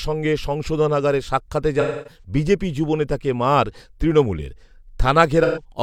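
At 1.80 s and 5.43 s, AAC frame loss with concealment smears the speech for about 0.26 s, then 0.13 s. The decoder repeats the last good spectrum with scrambled phase, so harmonics blur into flat, noisy bands on a spectrogram.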